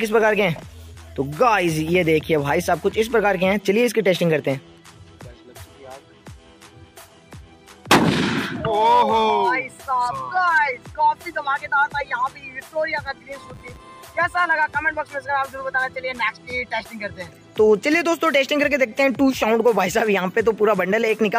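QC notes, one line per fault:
13.07–14.05 s, filter restarted on every block: a steady 100 Hz buzz sits under the sound for just under a second, rising and falling with its level. A filter in the chain is losing its memory between processing blocks and starting each one from silence, so every block opens with a small transient. Those clicks arriving every 10 ms fuse into the buzz, which fits a 10 ms block length.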